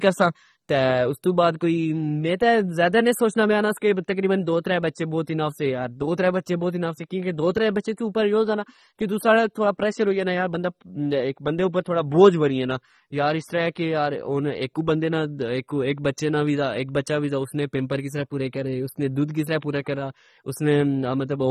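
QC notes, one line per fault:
throughout, AAC compression: the speech sounds plainly dull and smeared, with the top end cut away, holes in the upper spectrum and a fizzy, warbling texture on sibilants and held vowels. The likely cause is AAC-LC coding at a rate that fits about 24 kbps, where the encoder drops high bands or fills them with substitute noise. Unlike a simple low-pass filter, the damage shifts frame by frame, so the texture churns instead of staying steadily muffled.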